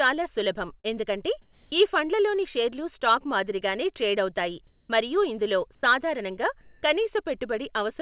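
Short concealed packet loss at 0.80–0.86 s and 3.00–3.03 s in this speech recording: about 40 ms and 20 ms of audio failed to arrive, and the receiver extended the preceding sound to bridge each gap, leaving a brief smear. Comfort noise in place of the background appears at 1.42–1.72 s, 4.67–4.89 s, 5.75–5.83 s and 6.61–6.83 s. There, the pauses, which sit about 33 to 35 dB below the loudest speech, become a flat, textureless hiss that shifts level by about −1, +4, −6 and +6 dB. This is likely discontinuous transmission substituting synthetic noise for the real room sound. The call path has nothing above 4 kHz, which points to narrowband G.711-style coding.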